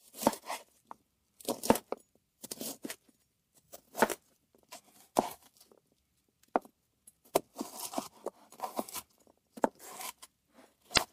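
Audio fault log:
10.94–10.99 s, damaged data in a compressed stream: a short burst of about 50 ms near the very end sounds like a chirp, squawk, click or short hole. Part of the compressed stream is corrupt here. The decoder cannot read those frames correctly. It produces garbled output, then loses its place. It must search for the next valid frame header before normal decoding resumes. That brief misread is what makes the sound break up.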